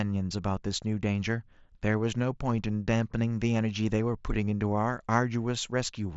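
The speech comes through a Bluetooth mSBC headset link working as designed, with content reaching up to about 7.7 kHz and only the light grain expected from a wideband headset codec at a rate that fits around 61 kbps.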